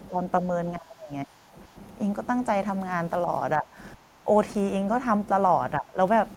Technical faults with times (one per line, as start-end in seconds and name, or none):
0.08-0.18 speech suppressed in double talk
0.76-1.53 speech suppressed in double talk
3.58-4.27 speech suppressed in double talk
5.80-5.97 speech suppressed in double talk